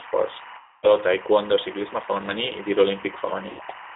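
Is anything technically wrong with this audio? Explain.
Yes, three faults are audible.

Timecode bleed runs throughout. A thin, chirping warble sits behind the speech, flipping between pitches near 1 kHz and 2 kHz and sitting well below the speech, roughly 20 dB down. The steady rhythm of the chirps fits 24-frames-per-second linear timecode. That code is a square wave whose pitch alternates as it encodes bits, and it has leaked from an adjacent track or cable into the audio path.

A G.729 codec colours the whole clip. The speech is confined to a telephone band of roughly 300 Hz to 3.7 kHz, with nothing above that, and it sounds rough and slightly synthetic. This damage is plainly audible. The quality points to the 8 kbit/s G.729A variant, which doesn't send the waveform itself. It rebuilds speech from a vocal tract filter, a pitch predictor and a few coded pulses per frame, so fine detail is approximated.

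VoIP packet loss concealed by the speech codec occurs twice. From 0.58 to 0.94 s, just before "taekwondo ciclisme femení i", the decoder fills in about 250 ms of missing audio. A shorter dropout from 3.50 to 3.63 s covers about 90 ms. In both places the decoder kept extrapolating from the last pitch and filter it had, lowering the gain with each frame. Because every frame builds on the one before, the speech stays weakened briefly after the packets resume.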